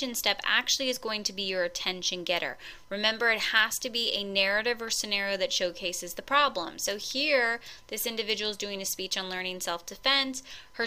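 No technical faults are audible anywhere in the clip.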